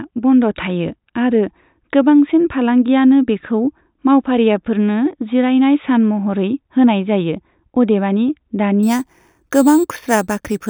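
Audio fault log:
8.83 to 10.69 s: imaging from sample-and-hold upsampling. In the last stretch of the speech, each sample appears to be repeated with no smoothing, which fits an 8 kHz stream raised to 44.1 kHz. Mirrored copies of the spectrum appear above the original band, the lowest filling 4 to 8 kHz at about 19 dB below the signal. This is heard as a bright metallic fizz that rises and falls with the speech and moves opposite to its pitch.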